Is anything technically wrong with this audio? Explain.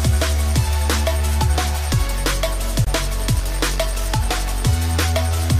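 Yes. At 2.85 to 2.89 s there is a corrupt frame muted. The decoder rejected a damaged compressed frame and silence replaced it, leaving an abrupt 40 ms hole, likely a single frame, with timing preserved.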